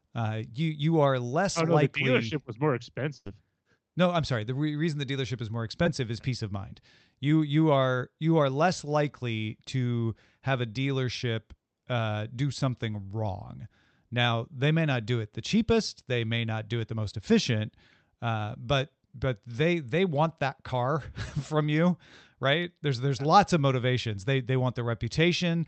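Right after "dealership was more", at 3.17 to 3.28 s, there's a burst of packet loss. A run of audio, about 80 ms of it, never arrived in time, so the receiver stretched out the last sound it had for roughly 82 ms, letting it sag in level. When the speech picks up again it has jumped ahead, and whatever fell in that gap is simply gone.

Later there's a short concealed packet loss at 5.84 to 5.87 s, sitting between "the dealership is more" and "is peace of mind". About 20 ms went missing here, and the decoder covered it with roughly 17 ms of synthesised continuation before blending back into the real signal. It's tiny, more of a quick smear or wobble than a gap. All of this rides on an Opus call path, where the top end stops at 8 kHz and the coding texture fits something around 32 kbps.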